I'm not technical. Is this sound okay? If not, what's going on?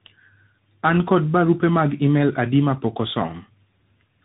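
No. Throughout the whole clip the speech shows tandem speech coding: the call passed through two different speech coders in a row, the second squeezing the already damaged output of the first. That leaves it rough, warbly and muffled, with nothing above 3.8 kHz.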